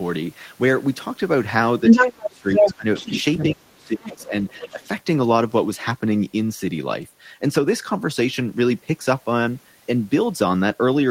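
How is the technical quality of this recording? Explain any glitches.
The recording has clear echo-control problems in its first five seconds, where a second voice bleeds in and the main talker repeatedly drops away.

The other side's voice leaking through comes at 1.87–2.26, 2.49–2.74, 2.95–3.44, 4.04–4.22 and 4.48–4.88 s. A separate voice runs under or over the talker, at first roughly 10 dB louder, later far quieter. The likely cause is loudspeaker echo left behind by the canceller. Unlike suppression, it adds sound.

Speech suppressed in double talk hits at 1.91–2.86, 3.5–4.33 and 4.73–4.85 s. The talker's level sinks by roughly 20, 30 and 10 dB while the far voice is present. This is likely an echo canceller turning everything down when both sides overlap. Here the talker's own voice dips, rather than an extra voice appearing.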